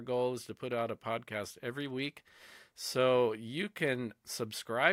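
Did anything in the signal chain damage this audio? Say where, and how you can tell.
No, nothing in the signal chain left an audible mark on this speech recording. None of the stages it passed through shows any damage that a listener can pick out.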